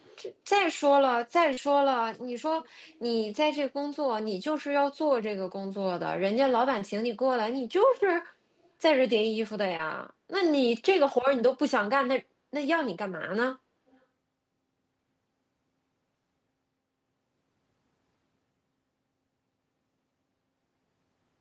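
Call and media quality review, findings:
Echo leak, 0.00–0.22 s, 0.58–0.62 s, 8.63–8.70 s, 13.88–14.00 s. Faint delayed copy of the talker, roughly 30 to 40 dB down, trailing by 244 ms. Likely far-end loudspeaker pickup that the echo canceller left unremoved and sent back.

Short concealed packet loss, 1.53–1.59 s, 6.79–6.83 s, 9.77–9.81 s. Brief smear or wobble where about 40 ms, then 20 ms twice, of audio arrived too late for the decoder. The receiver extended the preceding sound to fill each gap, then crossfaded back into the real signal.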